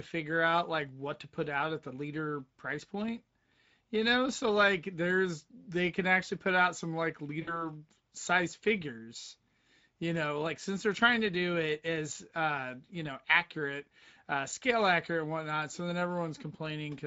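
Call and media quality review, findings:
Speex codec, whole clip: plainly audible coding damage, speech hoarse and noisy with a grainy excitation texture. Damage fits a mid-rate mode around 16.8 kbps. Spectrogram: blurred harmonics with noise filling the gaps between them, softer formant edges.

VoIP packet loss concealed by the speech codec, 7.41–7.70 s, after "put out some like", before "size figures": about 60 ms lost, fitting roughly three frames. Decoder extends the last pitch and filter, stretching the sound into a buzzy tone or coloured noise that fades, then weak recovery. Spectrogram: a frozen spectrum dimming; waveform: a decaying envelope.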